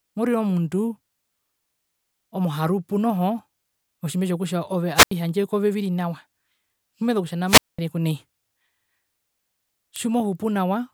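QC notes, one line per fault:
4.95–5.11 s and 7.46–7.79 s, wireless microphone squelch dropout: the radio link fades, hiss swells, then squelch mutes for 84 ms before "kove viri nawa" and 210 ms after "okutja nao". The spectrogram shows a broadband noise smear, then a blank gap; the waveform goes flat.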